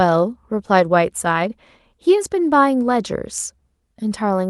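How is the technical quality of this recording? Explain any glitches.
No glitches are audible in the speech, which carries the ordinary signature of a WebRTC call path, with the upper frequencies rolling off around 12 kHz as that call codec does.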